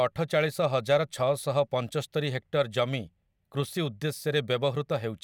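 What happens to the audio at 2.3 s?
At 2.3 s the speech plays through intact, with no dropout, click, distortion or other fault at that moment.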